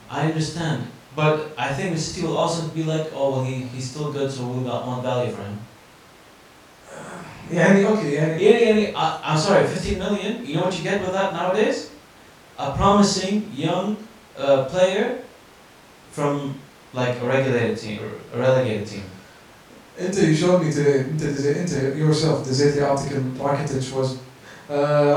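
Nothing goes wrong anywhere in this speech recording, so there's really nothing to flag here.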